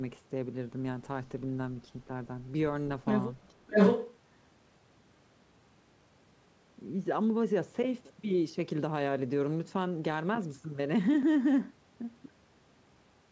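From 3.43 to 3.53 s a faint echo leak appears, very far below the speech. It is a copy of the far-end speech delayed by 610 ms, likely loudspeaker sound at the other end that its echo canceller failed to remove and sent back.

From 3.52 to 3.75 s the speech is suppressed in double talk. It dips by up to about 25 dB in pieces totalling around 200 ms. The likely cause is an echo canceller that, with both sides active, could not tell the talker from the returning echo and turned both down.

From 3.71 to 4.16 s the echo leak returns, again at a 610 ms delay but now roughly as loud as the speech or slightly louder. It sounds like a second, delayed voice running over the talker.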